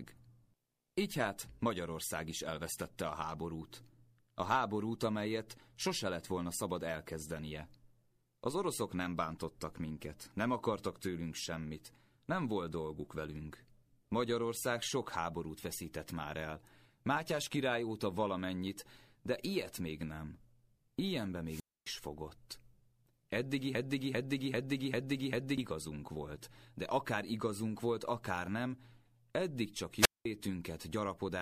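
A wireless microphone squelch dropout hits from 21.46 to 21.89 s: the analogue radio link fades, hiss swells briefly, and the receiver's squelch mutes the output for about 264 ms before the speech returns.

A broken-record loop runs from 23.75 to 25.58 s, just before "volt de akár igazunk". A 395 ms fragment repeats exactly, five times back to back, replacing the speech that belonged there. The likely cause is a stalled player or stream resending its last buffer.

A second squelch dropout follows at 29.96 to 30.25 s, right after "akár nem eddig csak". The signal fades again and the receiver mutes the speech for about 203 ms.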